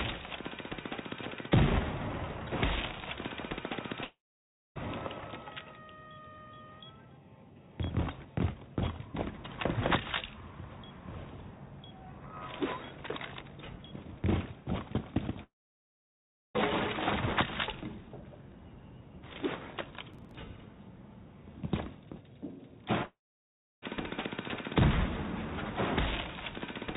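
The audio has three gaps that sound like a long network dropout, at 4.04 to 4.78 s, 15.43 to 16.57 s and 23.03 to 23.85 s, likely from packets that never arrived. Each time the last sound smears into a fading buzz or hiss, then silence for about 0.6 s, 1.06 s and 0.68 s. On the waveform these show as a decaying tail and then a flat line, and on a spectrogram as blank columns before the sound resumes further on. Between 20.14 and 20.35 s there is a gritty burst of processor overload crackle. Roughly ten short buffers of around 10 ms each were skipped, leaving hard-edged micro-gaps that show as a cluster of vertical streaks on a spectrogram and jagged discontinuities on the waveform. Throughout, the call path's G.711 A-law coding leaves nothing above 4 kHz, so the spectrogram is empty above that line.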